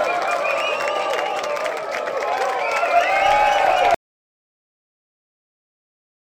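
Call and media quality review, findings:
Audio dropout to silence from 3.95 s through end of clip, about 2.4 s. Sound cuts off mid-flow into silence, no room tone or noise floor. Likely input lost upstream (device disconnect, link failure or mute) while recorder kept writing silence; content in gap unrecoverable.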